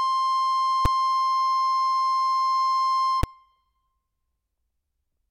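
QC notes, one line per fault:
0.85 s and 3.23 s: invalid numbers at full scale. Infinite or invalid results clip 5 ms blocks to full scale, so each is one sharp bang: flat-topped slab on the waveform, broadband vertical stripe on the spectrogram.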